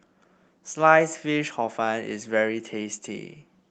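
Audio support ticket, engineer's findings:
No faults found; call path audio as expected.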